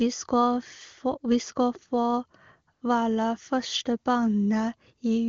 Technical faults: AMR comfort noise

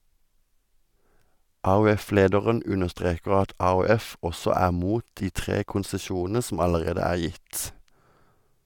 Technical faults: none

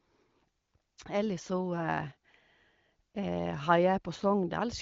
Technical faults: none

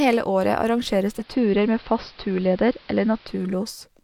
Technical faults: digital radio blending to analogue

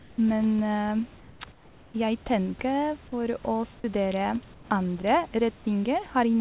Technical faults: comfort noise in place of the background

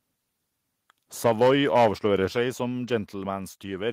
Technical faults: microphone overload; microphone volume stepped down

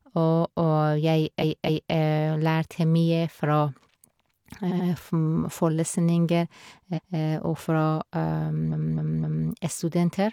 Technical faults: repeated frames

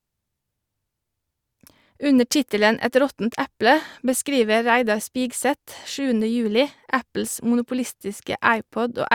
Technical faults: none

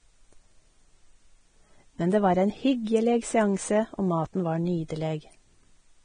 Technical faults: Vorbis compression

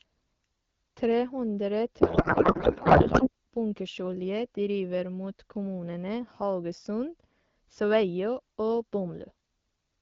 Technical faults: codec payload misread

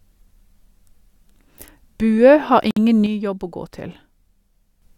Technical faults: gap at a join of encoded pieces; one channel drops out

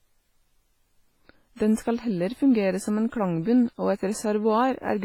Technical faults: WMA compression; pre-echo

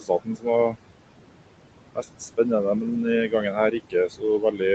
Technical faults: noise suppressor artifacts; speech cut by the noise suppressor

